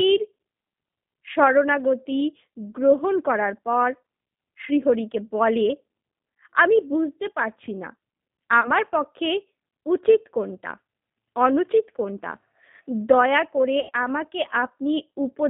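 From the start, the speech sounds narrow, slightly rough and synthetic, confined to roughly 150 Hz to 3.7 kHz with nothing above. This is the G.729 codec at 8 kbit/s, rebuilding each 10 ms frame from a vocal-tract filter, pitch predictor and a few pulses.

At 8.61 s the sound briefly smears into a buzzy tone or coloured noise that fades until 8.72 s, and a longer stretch follows at 13.80 to 13.91 s. This is VoIP packet loss concealed by the speech codec. About 30 ms and then 90 ms of audio went missing, consistent with one packet and then three. The decoder extrapolated its last pitch and filter at falling gain, and the sound stays weak or distorted briefly after the packets resume.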